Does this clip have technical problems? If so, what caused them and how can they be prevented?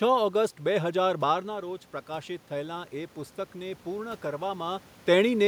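Yes. From 1.46 to 4.88 s the voice and the room noise behind it swell together, slowly, by about 5 dB. This is automatic gain rising: the input fell by about 9 dB as the talker moved back around 1.5 s, and the gain control gradually compensated. Disabling automatic gain, or using fixed gain with a steady microphone distance, would prevent it.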